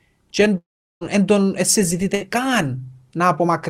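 At 0.57 s, right after "και εν", the speech breaks off until 1.03 s. The last sound is stretched into a brief fading buzz, then near silence for about 0.38 s. This is likely a long network dropout. About 0.44 s of speech never returns, and it resumes at "εν τον".

At 2.15 s, just after "εν τον", a burst of packet loss cuts out about 60 ms. The receiver holds the last sound for about 55 ms as it fades. The speech then jumps ahead at 2.22 s with that piece missing.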